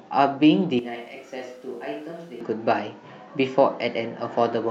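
Speech recording. From 0.79 to 2.41 s it turns abruptly roomy and thin, about 10 dB quieter. Likely a switch to a distant microphone.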